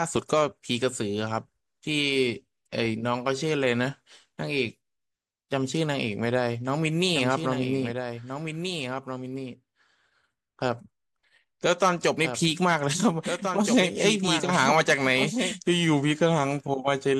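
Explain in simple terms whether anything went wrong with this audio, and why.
A doubled audio track is the problem: the speech was likely captured a second time through a slower path. From 7.2 to 15.5 seconds, a slightly quieter copy follows about a second and a half behind, switching on and off abruptly.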